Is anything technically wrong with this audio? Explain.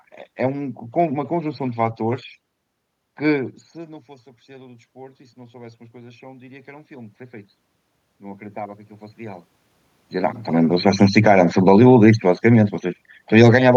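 Yes. From 3.74 to 7.21 s, the speech and the room noise behind it swell together by about 6 dB. This is automatic gain rising: the input fell by about 20 dB when the talker moved away from the microphone around 3.5 s, and the gain control slowly raised its gain to compensate, lifting the background along with the speech.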